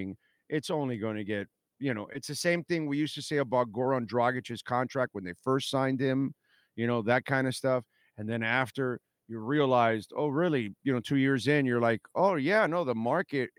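No technical faults are audible.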